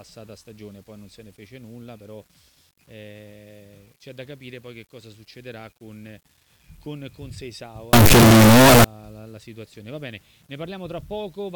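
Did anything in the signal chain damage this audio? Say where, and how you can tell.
Yes. From 7.93 to 8.84 s the audio turns into a very loud, harsh buzz in which quiet moments are as loud as everything else. This is likely a signed and unsigned mix-up at the sample-format conversion stage, with 8-bit samples read with the wrong sign convention. Flipping the top bit moves silence to full scale, so every zero crossing becomes a full-range jump.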